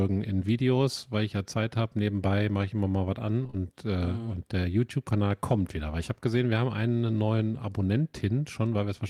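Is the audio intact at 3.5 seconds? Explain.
No. From 3.43 to 3.55 s the speech turns into a brief smeared wobble, as if the sound were held and stretched for a moment before blending back. This is short concealed packet loss: three consecutive 20 ms stretches of the call arrived too late for the decoder. Each time, the receiver covered the gap by extending the preceding sound, continuing its pitch where voiced and shaped noise where not, then blended back into the real audio.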